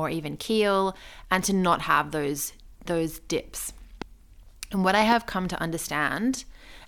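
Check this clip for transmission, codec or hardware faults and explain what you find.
Two loud pops break into the speech. A brief voltage pulse, likely from static, a switch or a driver glitch, enters the signal path and lands on top of the speech as a sharp click-thump while the speech carries on underneath. The first, from 4.02 to 4.04 s, right after "have those those dips", peaks about 15 dB above the speech. The second, from 5.12 to 5.14 s, between "what I" and "come to", is somewhat softer, about 10 dB above it.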